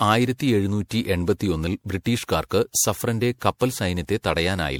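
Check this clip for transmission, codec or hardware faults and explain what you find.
There's one codec problem running the whole way through. Generation loss: the speech sounds swirly, hollow and smeared, with blurred attacks, likely from roughly seven passes through MP3 around 96 kbit/s, each pass stacking new quantisation noise.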